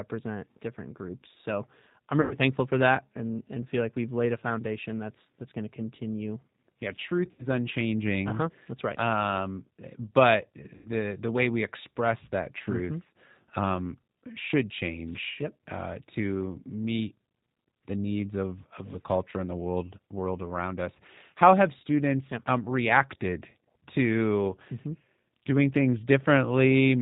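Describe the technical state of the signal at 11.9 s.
At 11.9 s, as throughout the clip, the speech carries G.729 codec damage: each 10 ms frame is resynthesised from a filter model, pitch prediction and sparse pulses, consistent with an 8 kbit/s coder. Nothing above 4 kHz survives, so the speech sounds dull, grainy and slightly artificial.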